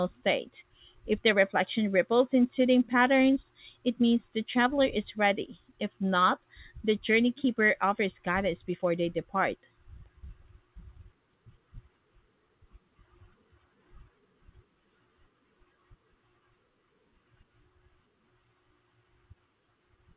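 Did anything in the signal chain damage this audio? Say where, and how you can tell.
Yes. The damage happens at the jitter buffer, from clock drift between sender and receiver. The sender's clock runs roughly 4 percent fast, so the buffer keeps overfilling. Small timing hiccups recur throughout the speech at uneven intervals, never settling.

The receiver answers with repeated timing corrections from 0.02 to 19.98 s. It keeps discarding short slices to catch up, which gives an effective speed of 104 percent. The cuts all go the same way and are unevenly spaced. They are heard, if at all, as slight skips or an unsteady tempo.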